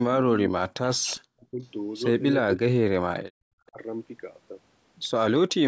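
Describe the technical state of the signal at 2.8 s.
At 2.8 s the speech falls inside a stretch of suppression running from 2.43 to 3.5 s, most likely speech suppressed in double talk. The level dips deeply, by around 40 dB at its worst, and the signal breaks up in pieces totalling roughly 0.7 s. When both ends of a call are active, an echo canceller that cannot tell the local talker from loudspeaker echo attenuates everything, and the talker gets chopped away with the echo.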